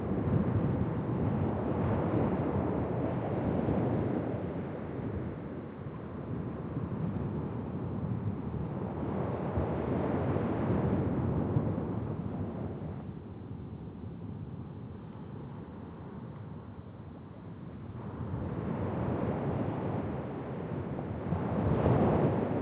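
Nothing faulty is audible: the sound comes through a call path with no content above 4 kHz, which fits G.711 A-law at 64 kbps, and that band limit is simply how this codec behaves.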